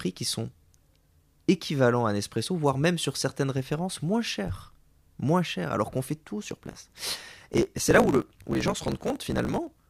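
From 6.4 s, right after "alors qu'on fait tout", to 9.81 s, the speech takes on a steady buzz at about 54.4 Hz and runs about 1.16 times too fast while keeping its normal timbre. This is a truncated block size mismatch: one stage writes longer blocks than the next reads, so the tail of each block is discarded. The buzz sits at the block rate, which fits 1024-sample written blocks.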